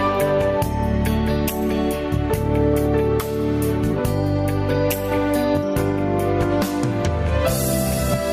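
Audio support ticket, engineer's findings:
Gain pumping, whole clip. Swing around 10 dB between gaps and peaks. Loud and soft passages pushed close together in level; dynamics flattened, squashed character. Probable component: input gain likely set far too high for the mic, with a fast limiter or compressor clamping each loud onset and releasing in the gaps.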